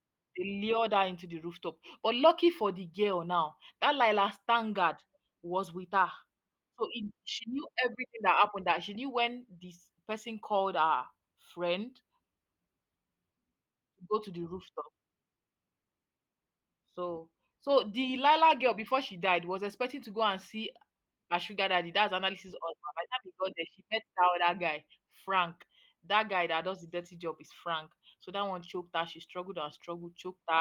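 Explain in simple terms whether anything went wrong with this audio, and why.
Nothing went wrong with this speech recording: it passed through Opus voice compression working as intended, which leaves only a light, ordinary trace on the sound rather than any sign of a problem.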